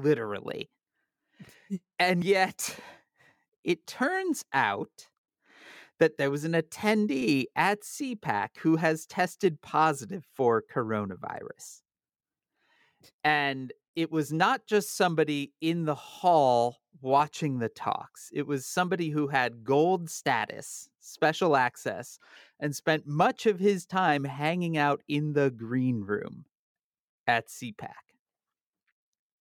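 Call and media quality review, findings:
Audio missing between chunks: brief skips at 2.22 s, 17.20 s (after "somebody in the hall") and 22.19 s, a few milliseconds lost at each splice, likely a 5 s chunk boundary in the recorder.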